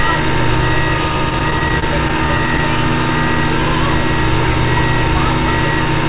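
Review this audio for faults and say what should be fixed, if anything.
Between 1.3 and 2.6 s, packets reached the receiver late or more slowly than they were played out, so the jitter buffer kept running dry. This produces repeated stalls (stutter): eleven brief holds, each at most 26 ms, in which the receiver stretches the last bit of sound until fresh data arrives. Nothing is lost, but about 128 ms of filler, roughly a tenth of that stretch, makes the sound drag and hitch unevenly. Through the G.711 call path, nothing above 4 kHz is present. Letting the jitter buffer adapt to a larger target delay when arrival timing turns irregular would prevent these stalls.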